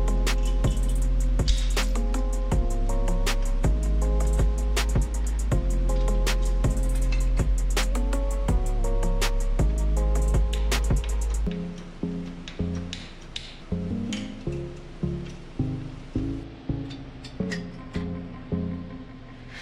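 A clock-matching stage likely stepped its playback rate up 5.8% to rebalance its buffer, causing a drift correction step from 7.92 to 8.79 s and again from 16.23 to 17.52 s. Each time the sound runs fast and rises nearly a semitone, then snaps back.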